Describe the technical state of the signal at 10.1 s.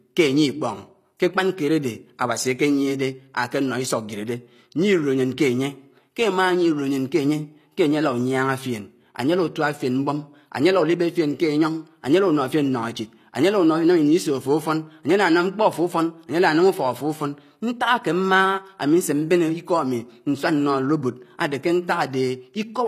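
At 10.1 s, as throughout, sibilants sound gritty and metallic with nothing above 14.9 kHz, likely HE-AAC compression rebuilding the treble from copied lower bands.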